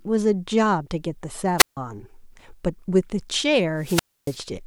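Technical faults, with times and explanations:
1.58–1.77 s and 3.76–4.41 s, wireless microphone squelch dropout: the speech gives way to a brief swell of hiss, then near silence for about 152 ms and 281 ms. The microphone's radio signal faded so far that the receiver's squelch muted its output until reception recovered.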